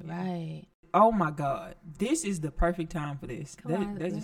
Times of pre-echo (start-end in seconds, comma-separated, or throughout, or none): none